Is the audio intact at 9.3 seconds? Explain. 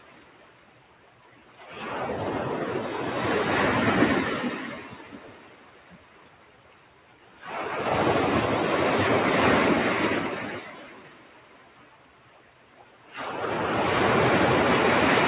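No. At 9.3 s, as across the whole clip, a noise suppressor applied to these sounds treats steady tones and ambience as noise. Attacks pass while sustained parts and tails drop by around 20 dB, so the sound pumps and thins. Unlike packet-loss dropouts, this follows how steady the sound is rather than landing as timed gaps. The band stopping at 4 kHz fits a G.711 call path.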